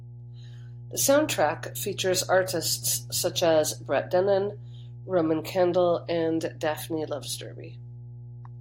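Mains hum runs under the speech throughout. A steady 60 Hz tone sits about 15 dB below it. A ground loop or nearby transformer is leaking power-line current in.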